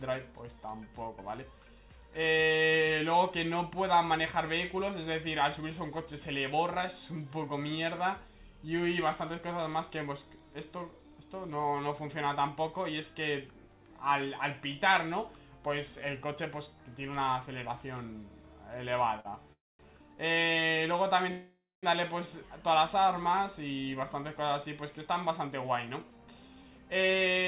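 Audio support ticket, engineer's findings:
Short stall from a late packet at 19.20 s. Sound held for 46 ms, slight buzz or dip, nothing lost. Jitter buffer ran empty and the receiver stretched the last sound until the packet arrived.

Call audio freeze at 19.53 to 19.81 s and 21.31 to 21.85 s. A fading buzz or hiss, then silence of 220 ms and 240 ms. Likely held-up packets emptying the jitter buffer. Audio resumes where it stopped, adding 265 ms and 515 ms of delay.

Jitter buffer speed-up from 24.37 to 27.46 s. Audio runs at 106% speed, same pitch, and sounds hurried. Receiver trimmed short pitch-period pieces, roughly a fifth of a second in total, to cut the built-up delay.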